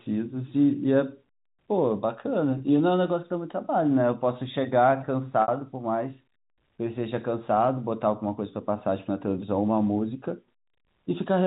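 At 2.58 to 2.60 s there's a brief bit of packet loss with pitch repetition: about 20 ms went missing, which fits a single lost packet, and the receiver papered over it by looping the last pitch period, so you just get a slightly held, buzzy moment. The second one, 5.42 to 5.48 s, is longer at 60 ms, enough for the repeated cycle to fade out toward silence before the speech cross-fades back in over the narrowband G.711 line.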